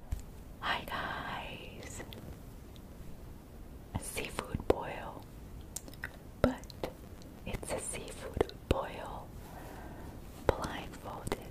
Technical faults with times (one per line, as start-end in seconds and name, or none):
1.96-2.36 processor overload crackle
6.74-7.85 processor overload crackle
10.68-11.39 processor overload crackle